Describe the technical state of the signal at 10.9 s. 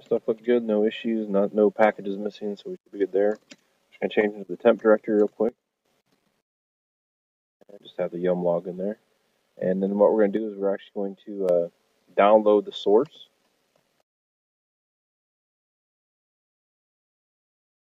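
At 10.9 s the signal sits inside a sudden gain jump running from 10.37 to 11.49 s. The level drops abruptly by about 6 dB, sound and noise floor together, likely from a digital gain step applied between adjacent samples without any ramp.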